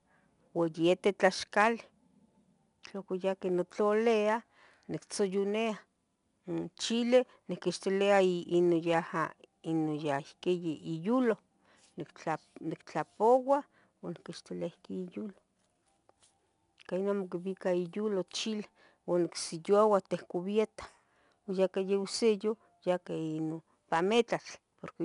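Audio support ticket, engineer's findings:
4-bit ADPCM compression, throughout clip. Gritty, level-following hiss riding louder speech; attacks distorted where adaptive step lags. Nothing above 10.6 kHz, suggesting roughly 22 kHz sampling. Damage plainly audible; consistent with an ADPCM encoder near 89 kbps.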